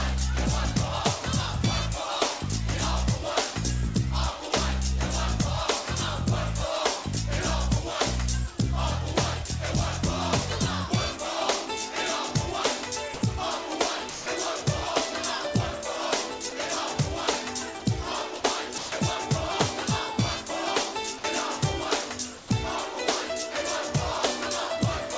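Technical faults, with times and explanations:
13.14–13.22, 14.10–14.26, 16.50–16.52, 17.80–17.82, 18.40–18.44, 18.78–18.92, 21.18–21.24 and 22.38–22.50 s: sound dropped by the voice detector. Stretches of 20 to 160 ms give way to flat, steady noise. Then the sound returns. The sender's detector likely took these moments for background and stopped sending. The receiver filled each gap with comfort noise.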